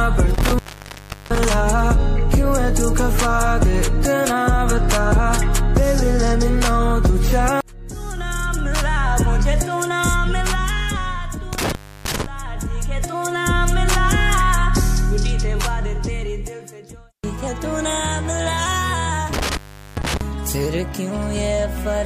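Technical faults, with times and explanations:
0.34–1.45 s, 11.53–12.26 s and 19.33–20.21 s, intermittent contact: a loose plug or cable keeps letting go, so the sound drops out for about 0.72 s, 0.30 s and 0.40 s, with crackle at each break and a faint hiss filling the gap while the line's open.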